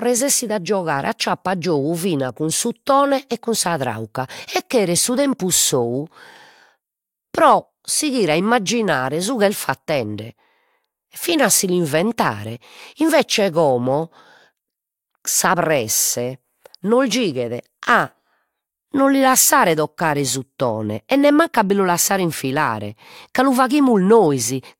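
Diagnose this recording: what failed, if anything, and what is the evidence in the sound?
Nothing failed: the recording gives no evidence in the sound of any fault.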